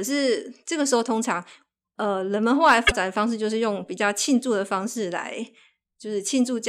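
At 2.84 to 2.92 s, the speech breaks into a short, harsh blip. This is damaged data in a compressed stream. Some bytes there were corrupted, so the decoder misread those frames. It lost sync and had to hunt for the next valid frame header.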